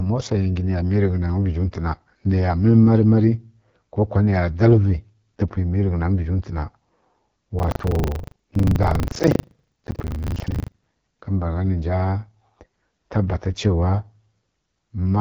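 AMR wideband (HD Voice) codec throughout: the speech is plainly rough and raspy with nothing above 7 kHz, which fits one of AMR-WB's lowest rates, around 8.85 kbit/s.

Buffer tearing from 7.56 to 10.86 s: the ring buffer's writer and reader cross, so about a fifth of each buffer replays audio some 70 ms old, giving a 25 Hz robotic rattle.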